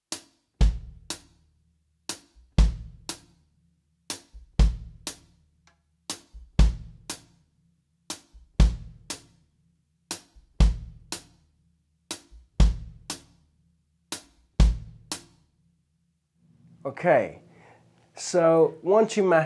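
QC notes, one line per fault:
No faults heard anywhere in this audio.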